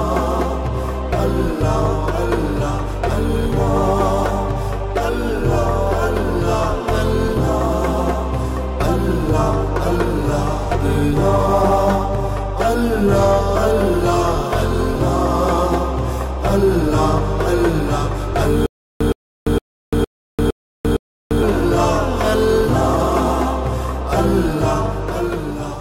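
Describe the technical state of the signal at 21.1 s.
The playback most likely stalled and kept re-serving its last fragment between retries, producing a stutter with silent gaps from 18.66 to 21.43 s. The same 117 ms burst repeats six times, each followed by 344 ms of digital silence, a steady 461 ms cycle replacing the missing audio.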